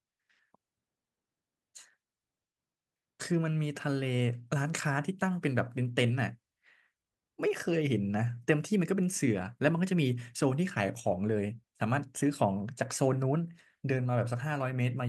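Nothing stood out on listening to this speech recording.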